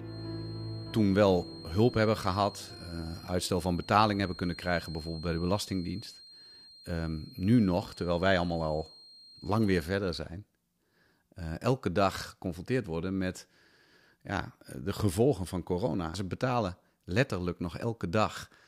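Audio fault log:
0.0–9.95 s, feedback whistle: a loudspeaker-to-microphone loop, likely held right at the feedback point, sustains a thin 4.2 kHz whistle, well below the sound, that swells and fades slowly in level.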